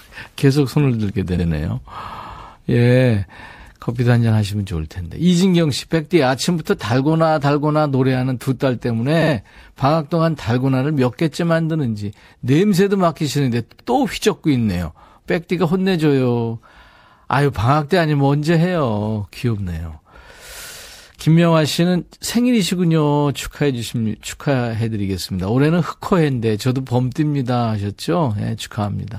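Repeated frames occur at 13.70 to 13.86 s. A block of about 78 ms of compressed audio was delivered more than once, so the decoder plays the same slice of speech three times in a row. The block length fits a short run of codec frames. Each restart lands where the end of one copy meets the start of the next, producing a brief stutter. The two extra plays stretch the clip by about 157 ms.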